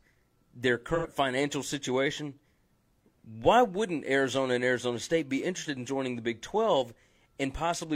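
Right at the start, from about 0.95 to 1.06 s, just before "financial situation", there's a short AAC frame loss with concealment. Roughly 85 ms of audio went missing, which fits two dropped frames, and the decoder papered over the gap by reusing the last good spectrum with its phase scrambled. You hear it as a quick smeared, noisy patch rather than a clean dropout, and then the speech picks back up.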